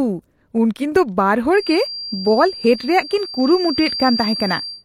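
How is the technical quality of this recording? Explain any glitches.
The recording has one fault, a feedback whistle. From 1.5 s to the end, a thin, steady tone at 4.7 kHz sits behind the speech, roughly 10 dB below it, swelling and fading slowly. The likely cause is a loudspeaker-to-microphone loop held just short of runaway feedback.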